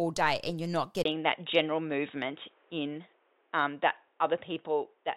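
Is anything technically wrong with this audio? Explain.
Yes. At 1.03 s the sound drops out for 20 ms, then stays dull and boxy to the end, with nothing above 3.8 kHz, a small level step and a faint new noise floor. The likely cause is an input switched to a poorer device. A spectrogram shows the upper band abruptly emptied, and the waveform shows a brief gap.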